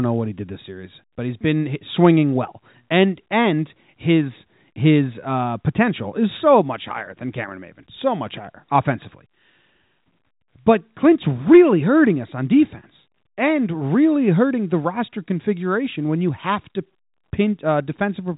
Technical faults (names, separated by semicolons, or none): none